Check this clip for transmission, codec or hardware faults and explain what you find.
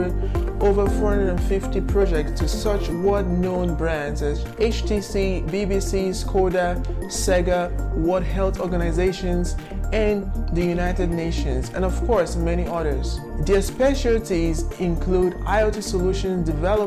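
Nothing stood out on listening that would point to a problem anywhere along the chain.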